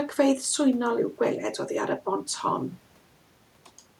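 No technical faults can be heard in this speech recording.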